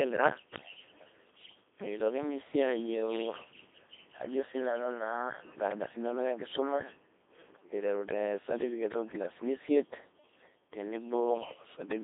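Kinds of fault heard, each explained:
Codec 2 vocoder, throughout: the speech has been reduced to a handful of parameters, pitch, voicing, energy and a coarse spectral envelope, and then rebuilt from sine waves rather than carried as a waveform, so it comes out heavily robotic and buzzy, with a degree of damage that fits a 2.4 kbit/s mode. The sound sits in a narrow radio-style band of roughly 200 Hz to 3.6 kHz, with nothing above 3.8 kHz.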